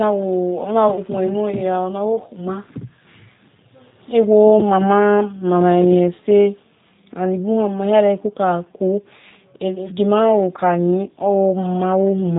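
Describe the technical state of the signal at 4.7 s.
At 4.7 s, as throughout the clip, the speech carries plainly audible G.729 codec damage, consistent with an 8 kbit/s stream. The codec rebuilds speech from a vocal tract filter and pitch predictor, sounding rough and synthetic. A spectrogram shows a hard ceiling at 4 kHz.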